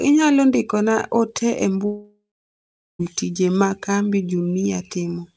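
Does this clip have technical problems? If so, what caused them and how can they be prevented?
Yes. A long network dropout runs from 1.86 to 3.01 s, likely from lost packets: the receiver stretches the last sound into a fading buzz, then about 0.77 s of near-silence, and about 1.1 s of audio never returns. A more stable connection, or forward error correction and redundancy on the call link, would prevent it.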